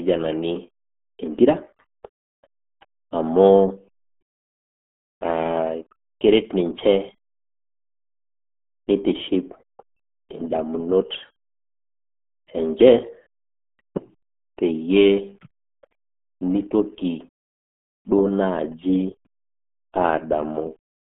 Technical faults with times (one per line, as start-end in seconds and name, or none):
0.00-21.09 RealAudio 14.4 codec